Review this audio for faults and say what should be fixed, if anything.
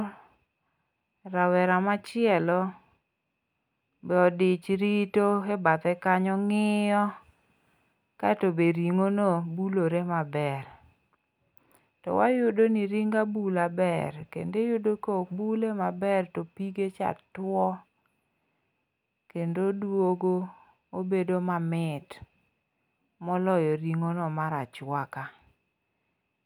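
Nothing in the signal calls for a fix, since the speech holds steady in level, timing and tone across the whole clip with no audible faults.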